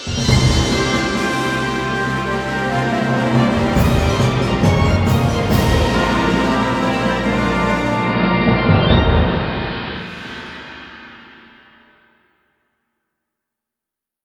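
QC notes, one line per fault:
7.81–10.30 s, digital radio blending to analogue: the receiver lost its digital stream and cross-faded over about 385 ms to the station's AM broadcast, then back again at 10.30 s. Because AM carries a narrow audio band, the treble drops away. The level shifts by about 2 dB between the two sources, and hiss rises to roughly 30 dB below the programme, the AM noise floor showing through.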